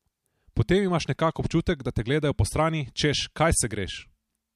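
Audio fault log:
Nothing to log here; the speech comes through with no faults to flag.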